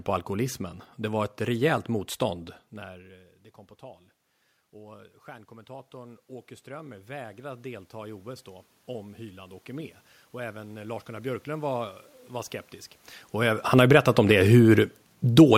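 From 4.72 to 8.54 s, after the input level drops by about 21 dB, automatic gain rising lifts gain by about 8 dB, so speech and room noise swell together; it rises again by about 6 dB from 9.16 to 12.61 s. Automatic gain falling follows: gain drops by about 6 dB from 13.59 to 14.01 s, just before "om det", then by about 4 dB from 14.54 to 15.53 s, after it, pulling the voice and its background down together.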